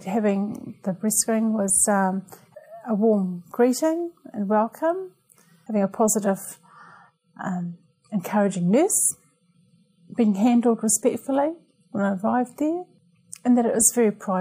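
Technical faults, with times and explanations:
No technical faults are present, so there are no times or explanations to give.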